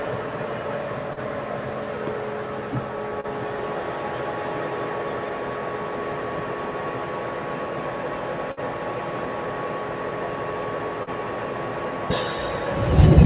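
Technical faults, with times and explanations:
Throughout: noise suppressor applied to music or sounds. Held sounds and tails dip and pump by a few decibels while attacks pass, because a speech suppressor treats steady sound as noise.
1.13–1.19 s, 3.20–3.27 s and 11.03–11.10 s: short concealed packet loss. Each is a brief smear or wobble where about 30 ms went missing and the receiver extended the previous sound to cover it.
8.52–8.60 s: burst of packet loss. A held, fading continuation of the last sound is followed by a jump forward, as about 60 ms never arrived and was concealed, with the band-limited call audio, nothing above 4 kHz, resuming afterward.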